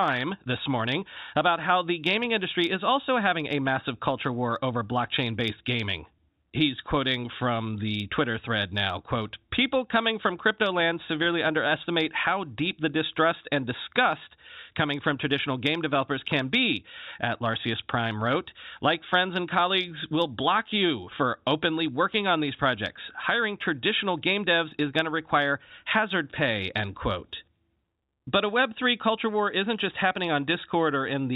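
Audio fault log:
Nothing stood out on listening to this speech.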